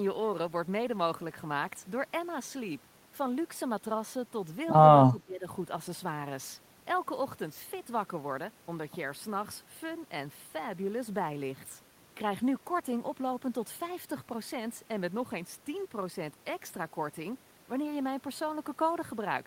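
From 5.09 to 5.46 s the speech sinks by about 15 dB. The waveform pinches to a narrow band. This is likely speech suppressed in double talk: an echo canceller turned the talker down while both ends spoke.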